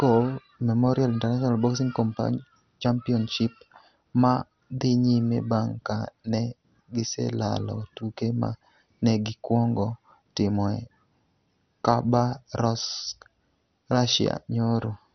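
From start to finish the speech is dull and band-limited, with nothing above about 6.1 kHz, and carries a heavy gurgling, granular distortion. The cause is likely MP2 compression starved of bits, in a way that fits a rate around 48 kbps. The coder has shut off its upper sub-bands entirely, switches bands in and out so they flicker, and quantises the remaining ones coarsely, which produces the watery, grainy texture heard on poor digital radio.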